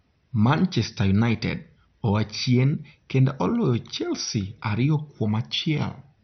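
Speech, and it's dull and gurgly the whole way through, with nothing above about 6.2 kHz and a grainy, warbling texture on every word. That's likely heavy MP2 compression: the upper sub-bands are starved of bits and the rest coarsely quantised, consistent with a rate around 48 kbps.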